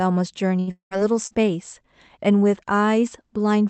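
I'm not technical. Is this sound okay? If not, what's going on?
No, it has three network glitches close together.

At 0.59 to 0.70 s there is a burst of packet loss. About 80 ms of speech never arrived, and the receiver stretched the last sound into a short fading buzz or hiss, so the sound skips forward rather than going quiet.

Right after, from 0.71 to 0.94 s, comes what is likely a long network dropout. About 200 ms is missing. The filler fades out and about 110 ms of real silence follows, which marks it as longer than the first gap.

At 1.27 to 1.34 s there is a short concealed packet loss. Only about 40 ms went missing, so it is patched smoothly and heard as a brief smear or wobble rather than a clear gap.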